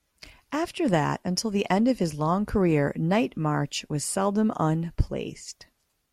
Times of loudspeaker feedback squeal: none

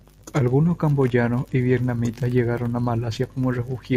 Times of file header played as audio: none

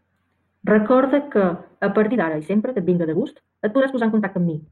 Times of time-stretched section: 2.05-4.72

